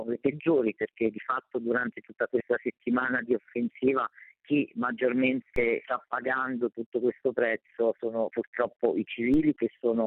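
At 5.56 s the zero line of the waveform suddenly jumps to a new offset of about -25 dBFS, a DC step such as a converter recalibrating or an offset input being switched in would cause. The offset then drains away through a high-pass at around 5 Hz, so it is heard only as a single low thump while the sound itself carries on unchanged. The same DC step recurs at 9.34 s, giving a second identical thump.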